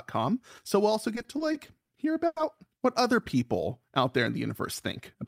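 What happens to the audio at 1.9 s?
Repeated stalls (stutter) end at 1.90 s, closing a run from 1.15 s: late packets drained the jitter buffer six times, each gap (up to 60 ms) filled by continuing the previous sound, so the speech drags and stutters without losing anything.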